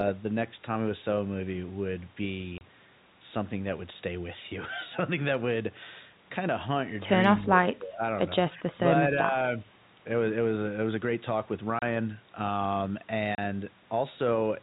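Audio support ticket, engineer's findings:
Packet loss filled with silence. Hard 30 ms gaps at 2.58 s, 11.79 s and 13.35 s. Each gap fits a single lost packet. The receiver inserts silence with no concealment, so the speech is cut abruptly.

Speech suppressed in double talk. Talker level dips at 7.39–8.03 s (deepest about 15 dB down), then at 8.57–8.78 s and 9.22–9.36 s (each about 10 dB). Likely cause: the echo canceller misreads overlapping far-end speech as echo and attenuates the talker. Band limit at 4 kHz consistent with the G.711 A-law path.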